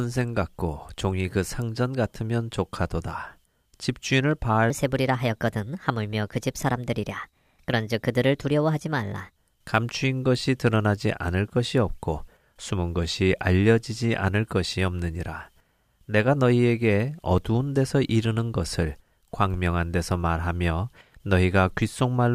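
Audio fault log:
4.70–9.36 s, section at the wrong speed: this stretch was likely played back against the wrong clock, running 1.25 times faster than recorded. Pitch and tempo rise together by roughly four semitones, so the speech turns high and hurried, then snaps back to normal.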